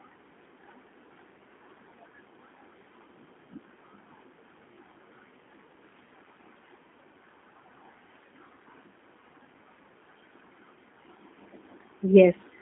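G.729 coding runs through the whole of this speech clip, and the damage is plainly audible. The codec rebuilds each 10 ms frame from a vocal tract filter, a pitch predictor and a few pulses, so the voice comes out slightly rough and synthetic, at a density that fits 8 kbit/s G.729A. The line band runs from about 150 Hz to 3.5 kHz, and nothing above 3.8 kHz survives, leaving a dull, narrowband sound.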